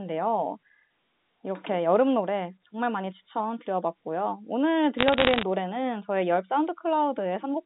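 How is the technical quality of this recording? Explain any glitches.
The recording has one glitch on a telephone-band speech path (roughly 150 Hz to 3.7 kHz, consistent with G.711 A-law coding). Bit errors on a digital phone line, 4.98 to 5.43 s: corrupted bits, under one percent, each alter a single sample, producing sharp ticks and crackle over the speech.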